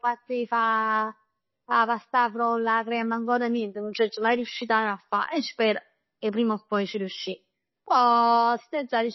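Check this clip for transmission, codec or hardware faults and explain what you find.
One codec fault runs through the whole clip. The likely cause is MP3 compression at a very low bitrate, consistent with something near 24 kbps. Starved of bits, the encoder removed all treble above 5.8 kHz and dropped weak frequency lines that flicker between frames, so the speech sounds dull, watery and swirly, with smeared consonant attacks.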